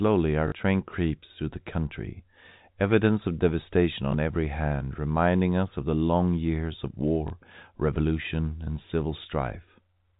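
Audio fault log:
0.48–0.52 s, 4.12–4.14 s, 7.28–7.30 s, packet loss with last packet repeated: a robotic stutter before "train creeps through" and small blips after "country evidence of devastation" and after "the long years of". 40 ms, then 20 ms twice, went missing and was filled by replaying the previous 20 ms packet.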